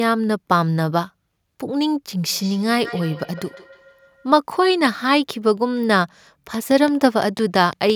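From 2.26 to 4.39 s there is feedback echo between two devices. A second device in the same room is playing back what the first one's microphone sent, and that microphone picks it up again. Each echo canceller removes only its own playback, so the loop goes uncorrected. The speech returns at a fixed delay of roughly 150 ms, as a thin, ringing copy whose loudest point sits about 19 dB below the direct speech.

From 6.54 to 7.91 s a train of clicks runs over the speech. The likely cause is interference from nearby equipment or a faulty connection or power supply injecting the same short pulse again and again. The clicks come at a regular 5.9 per second, around ten in all, and they peak a few decibels above the speech. The result is an even ticking that keeps going in the gaps between syllables.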